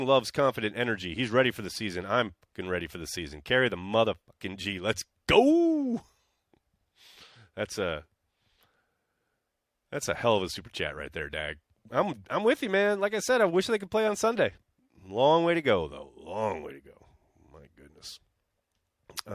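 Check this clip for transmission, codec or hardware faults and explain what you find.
The speech signal shows no transmission, codec or hardware faults anywhere in the clip.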